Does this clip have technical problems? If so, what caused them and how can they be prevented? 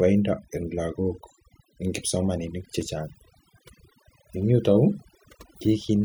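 Yes. Overdone noise removal runs throughout: a heavy-handed reducer mutes single frequency bands near its noise estimate, taking quiet speech detail too, leaving near-silent, twinkling background. Unlike a noise gate, it flickers band by band rather than muting everything. Use gentler reduction settings.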